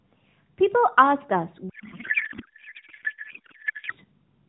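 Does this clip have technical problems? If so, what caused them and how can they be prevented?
Yes. From 1.70 to 3.93 s a codec payload misread replaces the speech with garbled noise and warble that barely follows it. This fits octet-aligned AMR frames being unpacked as bandwidth-efficient, which shifts every field into the wrong place. Unlike packet loss, there are no gaps or faded-out stretches, just continuous nonsense that stops at 3.93 s. It can be prevented by having both ends agree explicitly on the AMR payload format, with the octet-align parameter, during call setup.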